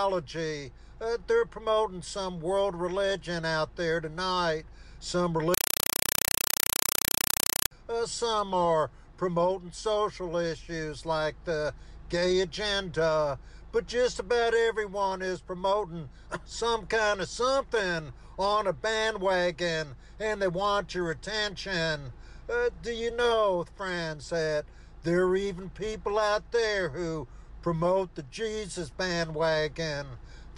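From 5.54 to 7.71 s the sound gives way to a compressed stream played as audio: loud, chattering static pulsing at 31.25 Hz, each 4 ms noise burst followed by silence. That points to an undecoded Dolby Digital stream, likely around 192 kbps, treated as plain samples.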